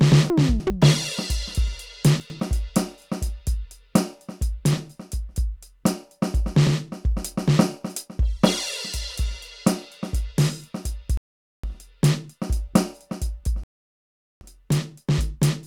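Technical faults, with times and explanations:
0.3 to 0.7 s and 2.2 to 2.4 s: chunks out of order. In the first span a 100 ms chunk of the music arrives three chunks late, and in the second one chunk late, so it plays after material that should follow it. Nothing is missing, but the sequence jumbles briefly, with three hard joins in each.
11.17 to 11.64 s and 13.64 to 14.41 s: rebuffering stall. The player runs out of downloaded audio and the music drops to silence, first for about 460 ms, then for about 780 ms, before resuming exactly where it stopped. No material is lost; time is added.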